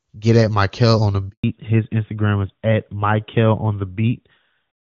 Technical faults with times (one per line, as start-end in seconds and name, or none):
1.30-1.44 handover gap
1.44-4.86 fallback to narrowband